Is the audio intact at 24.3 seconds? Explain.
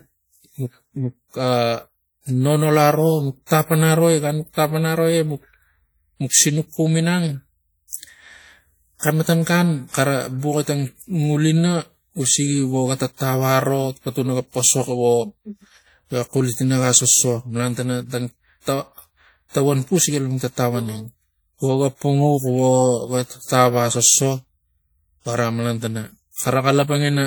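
No. At 24.3 s, as across the whole clip, the speech carries WMA compression damage, plainly audible. Transients ring and smear because quantisation noise from the long transform blocks is spread over tens of milliseconds around each sound, and weak spectral detail has been zeroed, leaving a washy texture with a hiss that swells and fades with the signal. This is likely a low-bitrate WMA encode, consistent with roughly 48 kbps, though content still reaches about 20.1 kHz.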